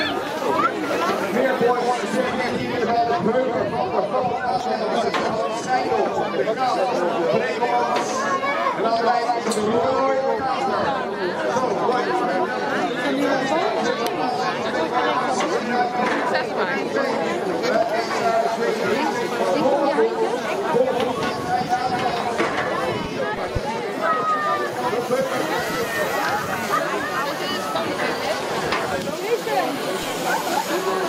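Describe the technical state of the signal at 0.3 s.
At 0.3 s the signal is intact, with no audible technical fault at that moment.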